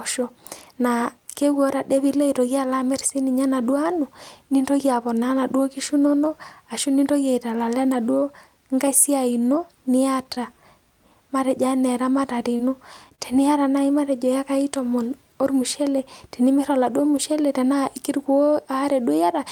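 Speech with four instances of short concealed packet loss, at 10.35–10.38 s, 12.57–12.61 s, 13.09–13.13 s and 13.15–13.20 s. Each time about 20 ms of audio arrived too late, and the decoder papered over the hole by extending the preceding sound before crossfading back, giving a brief smeared wobble. On a spectrogram each spot shows harmonics or noise stretched flat with no change.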